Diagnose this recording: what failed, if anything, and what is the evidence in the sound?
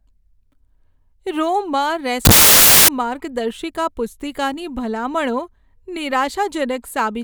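From 2.25 to 2.88 s the speech becomes loud, harsh broadband noise: samples built from the wrong bytes at sample-format conversion, with misordered bytes promoting noisy low bits.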